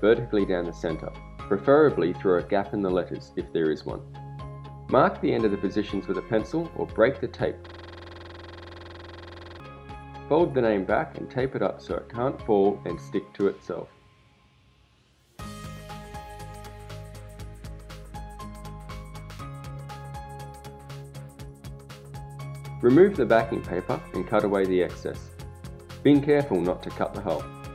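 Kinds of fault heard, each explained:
System hang loop: the computer or its audio driver froze, and the sound hardware kept replaying whatever chunk was left in its ring buffer. From 7.67 to 9.6 s, a single 46.44 ms slice of audio repeats exactly, some forty times over, which fits a 2048-sample buffer. Cycling at 21.5 Hz, the repetition fuses into a coarse, rattling buzz rather than distinct stutters, then stops abruptly at 9.6 s.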